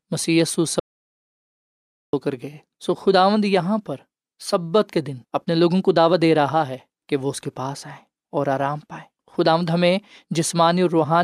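An audio dropout to silence runs from 0.80 to 2.13 s in this speech clip, about 1.33 s of silence with no room tone. The input was likely lost through a disconnected device, failed link or mute while recording continued, so that speech is gone.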